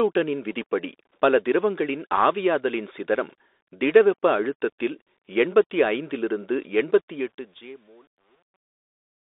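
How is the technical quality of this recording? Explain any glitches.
The recording has clear technical flaws: narrowband headset-codec damage throughout, and a fade at the end that breaks down into grit.

The Bluetooth CVSD headset codec affects the whole clip. The sound is boxed into roughly 300 Hz to 3.7 kHz, with granular hiss beneath it, scratchy s sounds and harshness on loud high content. CVSD sends one up-or-down bit per sample, which fits a 64 kbps link. Its adaptive step can't keep pace with fast, loud changes.

Truncation distortion on the fade begins at 7.13 s, just after "அழுத்தத்தில் எண்பத்தி ஐந்திலிருந்து". The fade-out starts around 7 s and ends at 9.21 s, but its tail turns gritty, worst from 7.63 s onward. The fade stage keeps too few bits and adds no dither, which fits a 10-bit stage, so the quiet waveform collapses into coarse steps.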